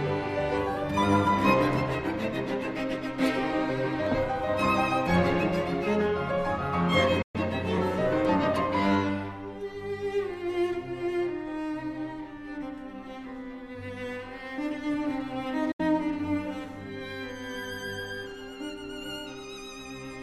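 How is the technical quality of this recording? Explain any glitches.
The recording has three technical glitches: one tiny hole in the signal and two brief reception dropouts.

At 4.07 s there is a block of digital silence. The playback chain likely failed to deliver samples on time, so a sliver of about 0.21 ms was filled with zeros. Because the signal jumps straight to zero and back with no fade, the hole is too short to register as a gap and comes across as a brief tick or dip.

At 7.22 s and again at 15.71 s there is a digital broadcast dropout. Corrupted or missing frames made the receiver mute until clean data returned. The first outage runs to 7.35 s, removing 120 ms, which fits about five lost frames. The second ends at 15.80 s, removing 72 ms, consistent with three frames. Each starts with a quick 8 ms fade into silence, so the sound briefly vanishes and then resumes with that stretch of programme missing.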